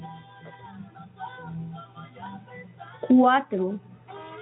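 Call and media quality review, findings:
No findings: this call and media quality review turns up nothing to report.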